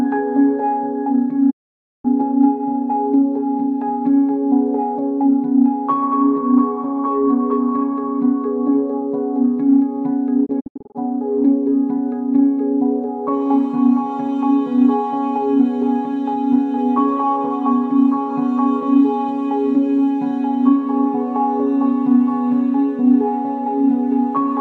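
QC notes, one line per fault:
1.49–2.06 s, digital broadcast dropout: the audio fades out over about 20 ms and stays silent for roughly half a second before returning mid-programme. The receiver muted while frames were failing, so that stretch of programme is gone rather than delayed.
10.45–10.97 s, digital broadcast dropout: a broken patch of short holes, the longest 72 ms, totalling 240 ms of silence over about 480 ms. Each hole fades in 20 ms, and the sizes fit 24 ms frames being dropped intermittently.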